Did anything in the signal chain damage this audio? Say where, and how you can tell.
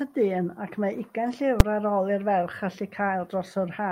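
Yes. At 1.60 s the speech is hit by a single sharp bang, the signature of invalid numbers at full scale. A calculation produced infinite or undefined values, and the float-to-integer sample-format conversion pinned them to one extreme code for one block of about 5 ms, which fits a 256-sample buffer. Ordinary clipping flattens only the loudest peaks of real sound, and a dropout goes silent. This burst ignores the level of the speech around it.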